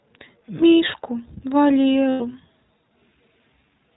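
The speech runs through a narrowband iLBC codec for its whole length, with a character that fits 20 ms frames at around 15.2 kbps. Everything above 4 kHz is cut away, so sibilants and breath lose their edge, and each frame's excitation is rebuilt on its own, giving the voice a plainly audible rough, slightly synthetic grain that stays constant from start to finish.

From 2.10 to 2.22 s, lost iLBC frames break the stream. About 100 ms of audio, which fits five missing 20 ms frames, never reaches the decoder, so it fills the hole by repeating the last pitch cycle blended with noise and letting it fade. The result is a brief held, buzzy, breathy vowel where the real speech should be. Because each iLBC frame decodes independently, the voice snaps back to normal almost immediately after 2.22 s.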